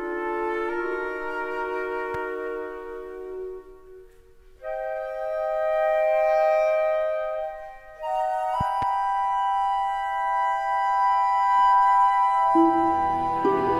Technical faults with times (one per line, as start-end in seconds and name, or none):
2.14-2.17 loud pop
8.61-8.85 loud pop